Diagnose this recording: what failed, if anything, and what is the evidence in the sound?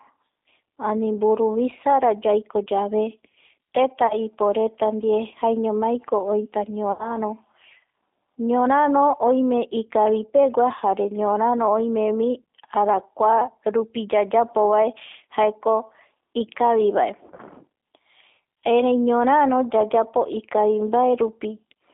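G.729 codec, throughout (codec stage): the speech is confined to about 250 Hz to 3.6 kHz and sounds rough and synthetic, rebuilt at 8 kbit/s from filter, pitch and pulses.

VoIP packet loss concealed by the speech codec (network stage): at 4.07–4.15 s before "iporeta ndie jaeñomaiko oita", at 6.92–7.18 s after it, and in scattered gaps across 17.27–17.41 s, the decoder extrapolates from the last pitch and filter into a fading buzzy tone or coloured noise.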